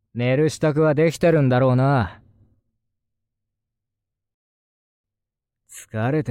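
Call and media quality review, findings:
Rebuffering stall, 4.34 to 5.04 s. Symptom: playback drops to silence for 0.7 s, then resumes exactly where it stopped. No content lost, only time added. Probable component: player buffer, starved of downloaded audio. Mechanism: playout paused until the next data arrived.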